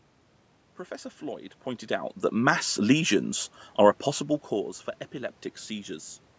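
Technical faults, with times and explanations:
0.88 to 5.98 s, automatic gain rising: the automatic gain control judged the input too quiet and raised its gain slowly, by about 5 dB over roughly five seconds, so the whole signal swells steadily. What separates it from a talker shifting position, which happens around 1.5 s and 4.0 s, is that the room noise rises along with the speech. Movement changes only the voice against a constant background.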